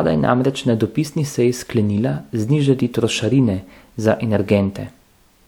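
No technical faults are audible.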